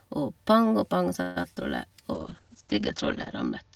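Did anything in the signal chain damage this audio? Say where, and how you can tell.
Yes, two stages. At the network level, repeated packet loss (robotic sound) runs from 1.21 to 1.63 s. Four gaps open in that stretch, the longest 145 ms. The receiver patched about 177 ms by stretching the last received speech forward, and about 60 ms is simply missing. That leaves 43% of the span concealed, so it sounds choppy. Buffer underruns would instead give clicks or plain silence, without that synthetic continuation.

In the codec, a call bitrate drop starts at 2.14 s and lasts to the end. The bandwidth estimate fell and Opus went from 48 to 8 kbps, staying at the bottom for about 1.2 s. At that rate the encoder narrows the audio band from 20 kHz to 8 kHz and quantises coarsely, so the speech turns muffled and watery. A plain low-pass filter or a dull microphone would remove the top end but would not add the rough, smeared coding texture heard here.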